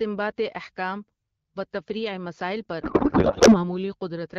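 From 2.81 to 3.74 s there's a codec payload misread: octet-aligned AMR frames get unpacked as bandwidth-efficient, so the speech collapses into garbled, warbly noise.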